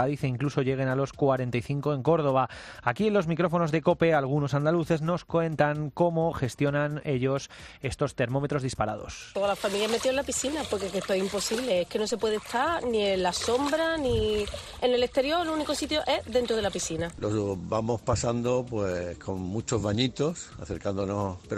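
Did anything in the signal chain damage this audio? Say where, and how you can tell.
Yes, three stages left their mark.

Across the whole clip the sound is dull and gurgling, with a granular roughness on what remains of the top end. This is likely MP2 compression at a low rate, which fits roughly 80 kbps. The codec starved its 32 sub-bands of bits, so upper bands drop out and return while the surviving ones are coarsely quantised. On a spectrogram the treble shows as ragged, flickering horizontal blocks with hard edges.

At 12.1 s there is a DC step, heard as a single low thump while the sound carries on unchanged. It points to a converter or input stage whose zero line shifted, and the offset holds to the end. On the waveform the whole trace jumps off the centre line at 12.1 s and stays displaced. On the spectrogram it shows as a brief broadband smear at the bottom of the display.

At 14.21 s a few short watery blips come through. 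This is DAB burbling, where reception bit errors at a rate of a small fraction of a percent got past error correction into the MP2 data. The burst suggests a handful of corrupted frames, with wrong samples putting short blips of noise into single sub-bands. On a spectrogram it shows as isolated bright rectangular patches confined to single bands.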